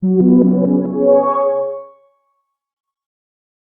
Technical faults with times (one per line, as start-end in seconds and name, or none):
none